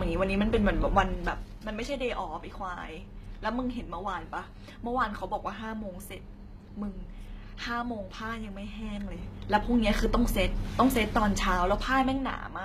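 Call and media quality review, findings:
HE-AAC compression, likely cause, throughout: speech treble gritty and lispy, s sounds metallic; replicated upper band not matching harmonics below crossover, fits a low-bitrate HE-AAC v2 encode near 20 kbps.

Zipper noise, 0.93–1.49 s and 8.64–10.03 s: ticking during level moves, roughly 10 dB down then 10 dB up; unsmoothed gain in 3 dB steps, each step a click.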